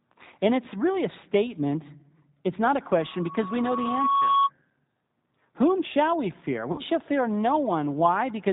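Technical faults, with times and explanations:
Throughout: G.729 codec. The speech is rebuilt from a vocal tract filter, a pitch predictor and a handful of pulses per 10 ms frame, which fits an 8 kbit/s G.729A stream. The damage is plainly audible as a rough, slightly synthetic texture. On a spectrogram, energy stops sharply at 4 kHz with nothing above it, and the harmonics below look smeared and grainy rather than clean, steady lines.
6.72–6.81 s: VoIP packet loss concealed by the speech codec. Just after "shall we fear", about 60 ms of audio went missing, which fits three lost packets. The decoder filled the gap by repeating its last pitch and filter while lowering the gain frame by frame, so the sound turns into a short buzzy tone or coloured noise that fades. Because each frame builds on the previous one, the speech resumes weak or distorted at "shall fear". The waveform shows a repetitive, shrinking envelope there, and the spectrogram shows flat, stretched energy.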